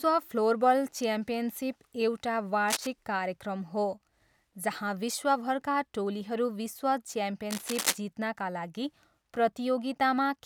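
From 2.68 to 2.88 s and again from 7.50 to 7.98 s, cable scratch noise crackles over the speech, only slightly quieter than it, likely from a worn connector shifting contact. Each burst appears as ragged spikes on the waveform and a dense, broadband smear on the spectrogram.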